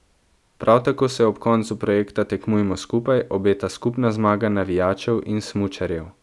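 Listening to the speech in this clip, nothing stood out as a technical problem.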